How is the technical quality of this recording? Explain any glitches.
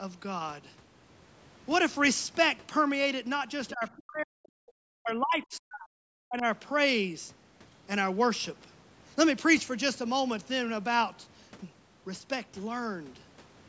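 The recording has two problems, both around the middle of the clip: a brief leak of a second voice, then two stretches where the speech is pushed down hard.

Other side's voice leaking through, 3.68 to 3.73 s: for about 50 ms a faint second voice slips in, around 25 dB below the main speech. The likely cause is that a loudspeaker's playback reached the microphone and the echo canceller did not fully remove it. On a spectrogram it would look like a thin, weak smear of harmonics that doesn't match the main talker's pitch track. On the waveform it barely shows.

Speech suppressed in double talk, 3.73 to 4.59 s and 4.86 to 6.45 s: the talker's level collapses in pieces, by as much as about 40 dB at the deepest points. Altogether the first stretch loses well under a second and the second around a second and a half. This is likely the echo canceller turning everything down while both sides talked at once, because it could not tell the talker from the echo. 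On the waveform the envelope shows sudden deep notches and gaps. On a spectrogram, energy drops out in vertical bands across the whole range, up to the 8 kHz ceiling of the call band.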